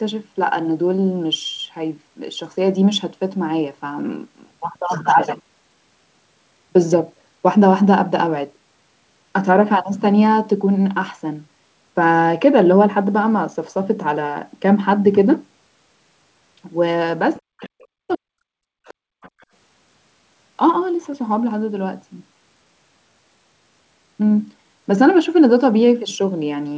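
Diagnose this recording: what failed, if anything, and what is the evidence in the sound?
Faint scraps of a second voice, well below the talker, surface at 17.35, 17.64, 18.85 and 19.21 to 19.45 s: other side's voice leaking through, likely from residual echo in call processing.

From 17.42 to 18.81 s the talker's speech is heavily ducked for about a second, likely speech suppressed in double talk by the echo canceller.

Room sound drops out between 19.09 and 19.4 s, dipping about 37 dB: background gated by the echo canceller while the loudspeaker was playing.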